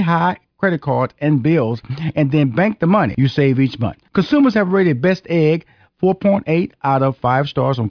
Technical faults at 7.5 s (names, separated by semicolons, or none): none